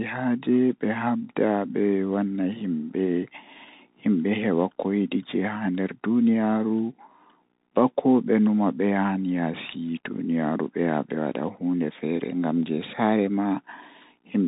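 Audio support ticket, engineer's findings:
Bluetooth CVSD headset codec, throughout: band stops at 4 kHz, scratchy s sounds, granular hiss under speech. Slope-overload grit separates it from clean telephone band-limiting.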